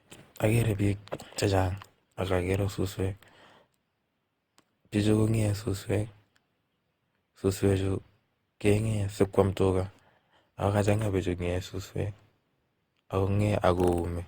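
From start to finish the speech carries generation loss: a swirly, hollow quality with smeared consonant attacks and a watery texture that stays constant. The cause is likely repeated lossy re-encoding, around seven passes, with a character that fits a 64 kbit/s Opus chain. What sets it apart from a single low-bitrate encode is that the bandwidth still reaches 20.2 kHz, yet the smearing is heavier than a full-band encode at that rate would produce.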